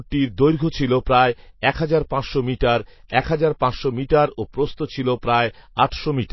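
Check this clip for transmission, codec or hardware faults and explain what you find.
There's one fault, running the whole way through. Throughout, the treble stops dead around 5.8 kHz and the speech sounds watery, likely MP3 compression starved of bits, which fits roughly 24 kbps.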